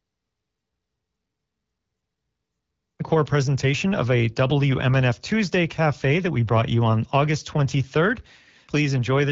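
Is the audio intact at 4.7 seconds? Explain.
Yes, the speech at 4.7 seconds is intact, with no fault at that moment.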